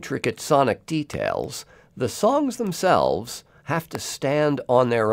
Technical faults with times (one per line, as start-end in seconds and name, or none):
1.14-1.16 loud pop
3.95-3.97 loud pop